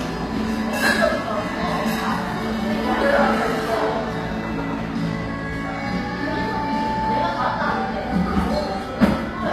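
Throughout, the audio was likely coded with HE-AAC compression at a low bitrate, so the treble above the core band is rebuilt rather than kept, sounding gritty and metallic, with nothing above 15.4 kHz.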